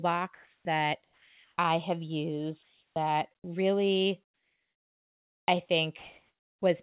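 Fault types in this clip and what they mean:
Comfort noise in place of the background: the pauses at 0.35, 1.04, 2.63, 3.35, 4.25 and 5.99 s lose their real background and carry a steady, featureless hiss instead, likely from discontinuous transmission. It is about 3 to 22 dB quieter in the first four, about 2 to 4 dB louder in the last two.
Onset clipped by the voice detector: speech at 0.60 and 3.40 s begins abruptly, its first 50 and 40 ms missing and filled with the same synthetic noise, likely because the sender's voice detector registered the returning sound too late to transmit it.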